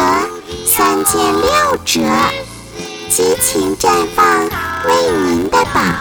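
Block size mismatch (padded) throughout: zero-padding fills each short block, fitting 512-sample reads, producing an 86.1 Hz buzz and 0.861× speed.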